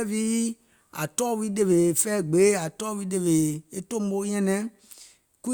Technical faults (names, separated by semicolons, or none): none